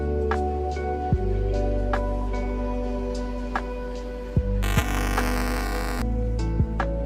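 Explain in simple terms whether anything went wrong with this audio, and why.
From 4.63 to 6.02 s there is buffer tearing, a buzzing rattle at 375 Hz. The playback software and the sound hardware fell out of step, so each short block, consistent with a 128-sample buffer, replays a small slice of audio from a few milliseconds earlier.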